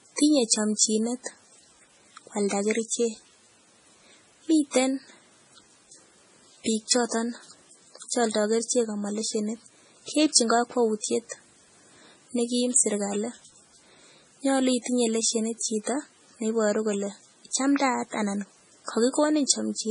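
The whole clip carries heavy MP3 compression damage. Nothing sounds above about 10.5 kHz, so the treble is cut flat. Weak frequency detail drops in and out between frames, giving a watery, swirly texture. The s sounds chirp metallically. This likely points to a low bitrate near 24 kbps.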